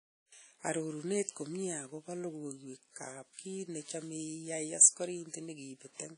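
A speech recording carrying plainly audible WMA compression throughout, likely from low-bitrate encoding, which fits roughly 32 kbps. Long transform blocks smear quantisation noise into a ringing, washy hiss that breathes with the voice, and nothing remains above 10 kHz.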